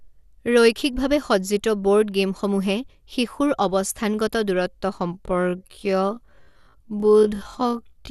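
From the start the speech sounds dull, with a gurgling, granular roughness and nothing above 12.2 kHz. This is likely MP2 compression at a low rate, around 80 kbps, where upper sub-bands are switched off and the remaining bands are coarsely quantised.

From 5.11 s to the end the pace abruptly drops to about half speed while the pitch stays the same, and the speech drags. This is likely a time-stretched section, where short pieces were repeated to lengthen the audio without lowering its pitch.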